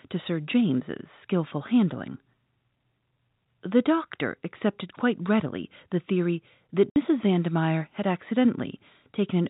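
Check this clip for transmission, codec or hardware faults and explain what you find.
There's one transmission fault in this speech. Right after "readily the theory that", from 6.90 to 6.96 s, packet loss filled with silence punches a 60 ms hole with hard edges, which fits three lost 20 ms packets replaced by silence. The G.711 telephone coding is working normally, and it's why nothing above 4 kHz comes through.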